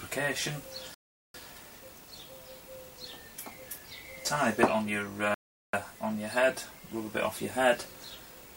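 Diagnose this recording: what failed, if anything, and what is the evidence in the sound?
The sound drops abruptly to silence twice, from 0.94 to 1.34 s and again from 5.34 to 5.73 s, each gap lasting about 0.4 s, and each time it picks up precisely where it broke off, with nothing skipped. That is a rebuffering stall at the playback stage. The player's buffer of downloaded audio ran dry, so output halted until more data arrived. The material is intact, but roughly 0.8 s of extra time has been inserted.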